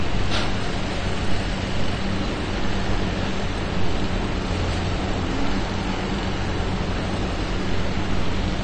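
A recording of sounds, likely passed through AAC compression at a low bitrate, with damage consistent with AAC-LC at around 32 kbps. The encoder has cut everything above 9 kHz, so the audio sounds dull, and the coarse quantisation leaves a smeared texture audible throughout.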